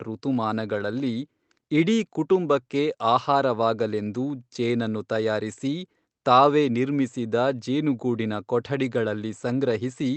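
No faults: the speech comes through an Opus call path at 24 kbps, with audio bandwidth held to 8 kHz, and nothing in it points to any fault.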